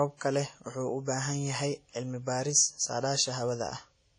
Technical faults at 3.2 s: WMA compression

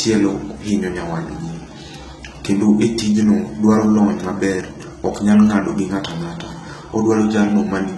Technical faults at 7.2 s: HE-AAC compression

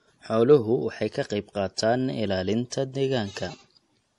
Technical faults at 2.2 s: low-bitrate audio saved at a high bitrate

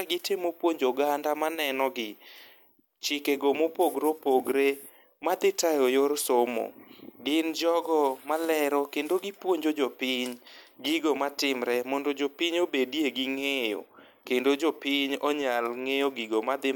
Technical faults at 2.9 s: none

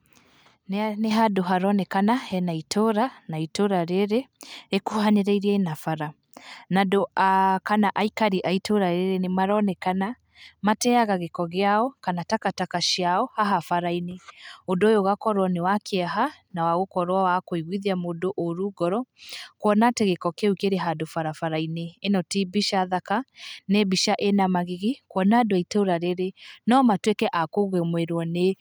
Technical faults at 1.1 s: microphone volume stepped up

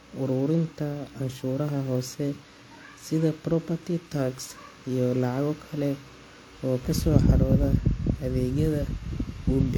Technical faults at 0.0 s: transcoding between lossy codecs

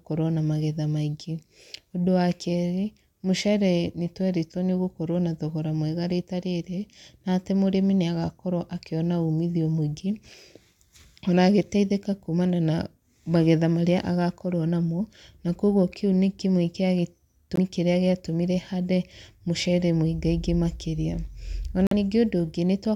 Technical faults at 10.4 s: none

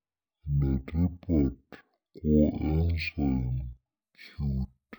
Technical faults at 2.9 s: stereo read as mono

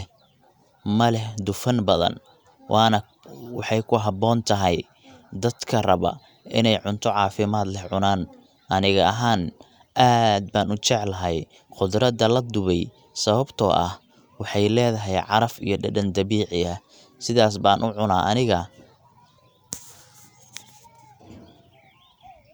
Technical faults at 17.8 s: none

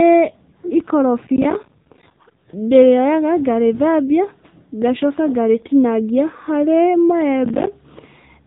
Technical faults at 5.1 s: AMR narrowband mobile codec

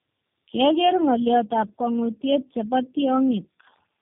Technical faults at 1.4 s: tandem speech coding

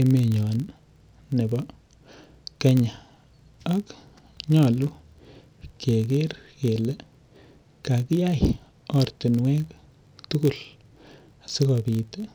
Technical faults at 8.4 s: filter restarted on every block

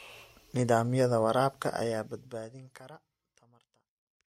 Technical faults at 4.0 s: none

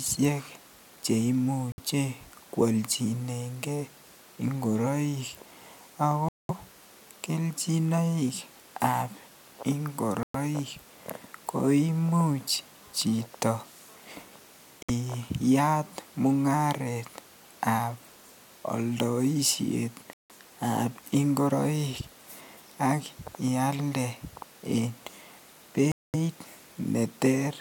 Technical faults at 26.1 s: Bluetooth stall

